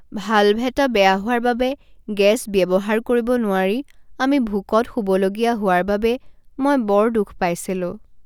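No technical faults are audible anywhere in the speech recording.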